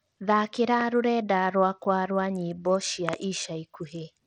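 A speech clip carrying Bluetooth SBC compression throughout: grainy, with flickering, thinned treble that likely comes from a starved SBC link, consistent with roughly 80 kbps, shown as patchy, gappy upper bands on a spectrogram. A loud pop hits at 0.81–0.83 s and a double pop at 3.09–3.16 s, each about 15 dB above the speech, likely electrical or driver glitches, visible as sharp waveform spikes and full-height vertical spectrogram lines.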